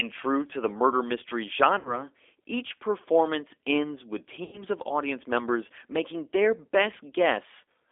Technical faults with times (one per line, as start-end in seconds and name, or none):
0.00-7.92 G.729 codec
1.79-2.04 VoIP packet loss concealed by the speech codec
4.44-4.64 VoIP packet loss concealed by the speech codec